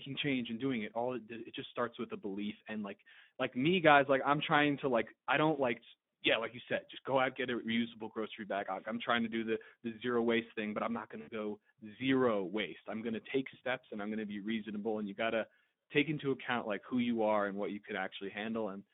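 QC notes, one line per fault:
throughout: Speex codec. The speech carries the rough, hoarse grain of a CELP coder that has too few bits for the excitation. Voiced sounds take on a noisy, hoarse texture, and the codec damage is plainly audible, which fits a setting near 11 kbps. The line is band-limited to roughly 150 Hz to 3.6 kHz. Low bass and everything above about 3.6 kHz are missing, so the sound is thin and narrowband.
11.21 to 11.30 s: VoIP packet loss concealed by the speech codec. About 60 ms of audio went missing, which is consistent with three 20 ms frames. The decoder filled the gap by repeating its last pitch and spectral envelope while lowering the gain. The result is a stretched sound that fades instead of a clean dropout. Each frame is predicted from the one before, so the speech sounds weak or distorted briefly after the gap ends.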